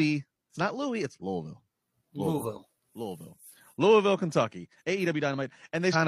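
Right near the end, at about 5.90 to 5.96 s, there's a short glitch from damaged data in the compressed stream. Some bytes were bad for roughly 56 ms, so the decoder misread those frames and lost sync until it caught the next valid header.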